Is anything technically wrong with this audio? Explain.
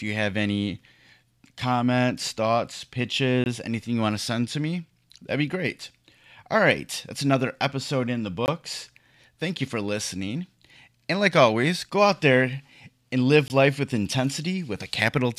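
Yes. This speech has a gap between chunks at 3.44, 8.46 and 13.48 s. The audio arrives in 5 s chunks, and each join leaves 20 ms of silence. No sound is lost. Each join is a brief hole, such as just before "life with".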